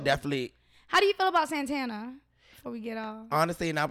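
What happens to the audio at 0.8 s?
Nothing goes wrong at 0.8 s: the speech runs on intact through that moment, with no dropout, click or distortion to be heard.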